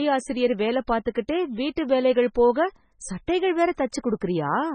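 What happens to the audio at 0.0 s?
From 0.0 s through the whole clip, the likely cause is heavy MP3 compression at a starved bitrate, fitting about 16 kbps. The encoder removes everything above 9 kHz and drops weak frequency lines from frame to frame, so the speech sounds dull, watery and swirly.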